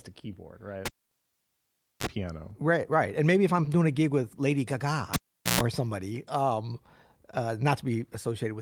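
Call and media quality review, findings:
Cable pulled and plugged in, 0.86–2.07 s after "a keyboard right" and 5.14–5.61 s. Pop, about 1.16 s and 0.42 s near silence, then 50 Hz (39 ms) and 60 Hz (123 ms) hum as the tip contacts, second pop. The mains buzz rules out a plain dropout.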